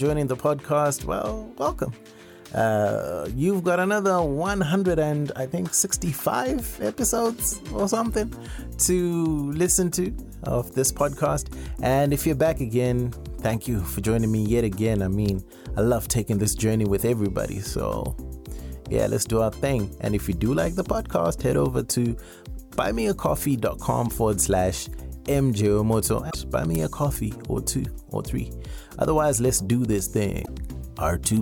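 At 15.29 s a sharp snap cuts across the sound. It is an electrical switching spike, very brief. A nearby switch or motor arcing into the audio line is the likely source. From 26.27 to 26.35 s comes a short glitch. This is damaged data in a compressed stream. Bad bytes made the decoder misread frames and lose sync. At 26.75 s another snap follows, slightly longer. From 30.42 to 30.49 s a second blip marks more corrupted data.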